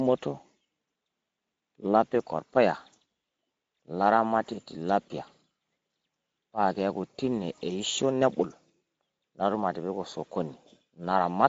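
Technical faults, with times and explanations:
Throughout, Speex codec: speech sounds noisy and hoarse; the bitrate points to about 17 kbps, starving the excitation. Above 4 kHz only shaped noise fills in, with nothing above 7.7 kHz, unlike clean band-limiting.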